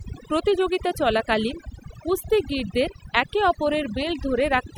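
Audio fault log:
Throughout: overdone noise removal. The background drops and breaks up into twinkling specks. A noise reducer set too strong is cutting individual frequency bands that sit near its noise estimate, taking quiet parts of the speech with them.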